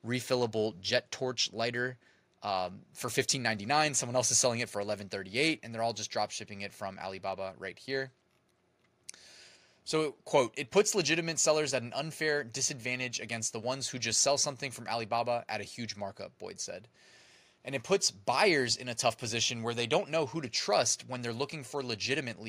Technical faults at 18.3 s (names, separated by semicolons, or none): none